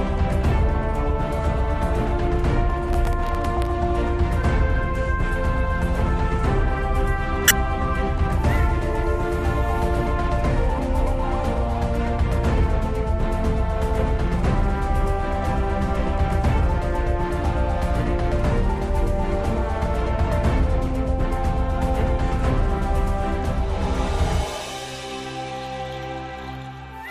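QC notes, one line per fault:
2.88–3.67 s, processor overload crackle: around twenty buffer deadlines were missed again and again, each gap filled by stale audio with hard edges, which fits very short buffers under a millisecond. The result is gritty tearing. A spectrogram shows dense vertical broadband streaks; the waveform shows jagged discontinuities.
7.48–7.51 s, corrupt frame decoded: a few damaged compressed frames were decoded anyway, so energy landed at wrong frequencies, producing a sharp chirp-like burst peaking around -5 dBFS. A spectrogram shows an isolated bright patch unrelated to surrounding content; the waveform shows a sudden spike.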